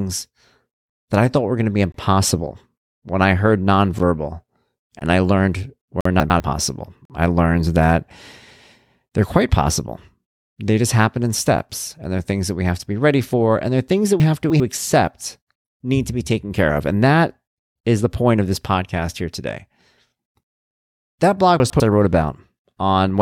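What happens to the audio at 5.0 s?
At 4.99 s a gap between stream segments opens. Two segments are misaligned by about 16 ms, so the speech briefly drops to silence with hard edges. No audio is lost.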